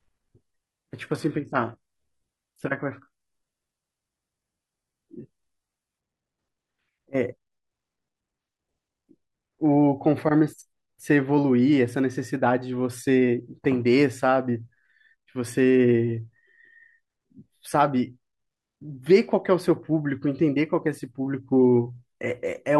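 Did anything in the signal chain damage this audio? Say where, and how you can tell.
Yes. The damage sits at the playback stage, where an adaptive stream started at a low bitrate. From 0.0 to 6.0 s the speech sounds dull and smeared, with synthetic-sounding treble and strong codec artefacts, which fits a parametric codec near 16 kbit/s. At 6.0 s full, natural treble returns abruptly with no gap, consistent with a step up to roughly 96 kbit/s. The sudden, gapless step sets this apart from a filter or a dropout.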